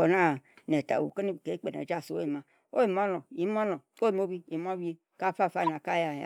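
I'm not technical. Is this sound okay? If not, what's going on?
No. One channel drops out at 1.10 s and stays gone to the end: the speech suddenly gets quieter, likely because one of the two stereo sides stopped feeding the mix. A corrupt frame is decoded from 5.63 to 5.69 s: a few damaged chunks of compressed data were played anyway, causing a brief glitch such as a chirp, squeak, blip or burst of noise.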